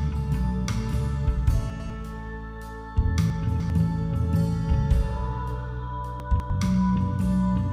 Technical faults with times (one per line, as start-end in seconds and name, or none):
1.70-1.90 chunks out of order
3.30-3.70 chunks out of order
6.20-6.50 chunks out of order